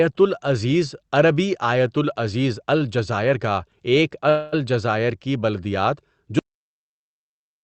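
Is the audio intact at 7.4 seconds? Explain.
No. At 7.4 seconds the clip is inside a cut-off end that begins at 6.39 s, right after "کی بلدیات", and runs to the end of the file. The final buffers were never written, so the speech stops mid-sound and drops straight to digital silence with no natural decay.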